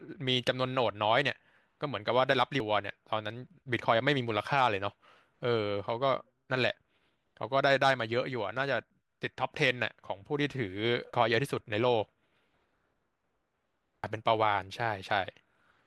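Brief glitches cut into the speech at 2.60, 11.14 and 14.04 seconds. Each is damaged data in a compressed stream: corrupted bytes make the decoder misread a frame, lose sync and hunt for the next valid frame header, producing a chirp, squawk, click or short hole.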